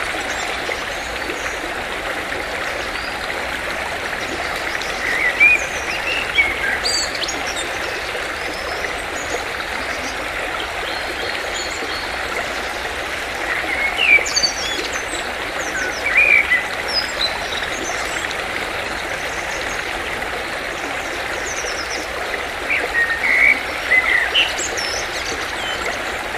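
At 14.44 s a single loud pop cuts in and is gone by 14.46 s. It lasts only about 20 ms. Its peak stands a few decibels above the surrounding sound. The sound carries on underneath without a break. The cause is likely a sudden voltage step, as from a plug, a switch, static or a driver glitch. The circuitry downstream shaped that step into a brief, sharp pulse. It is heard as one hard click-like thump.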